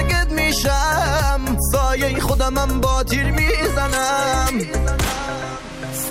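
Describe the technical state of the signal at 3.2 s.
At 3.2 s the signal is intact, with no dropout, distortion, glitch or other fault audible at that point.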